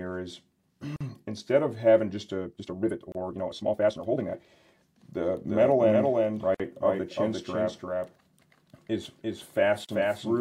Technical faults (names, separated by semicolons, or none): gap at a join of encoded pieces; time-stretched section; doubled audio track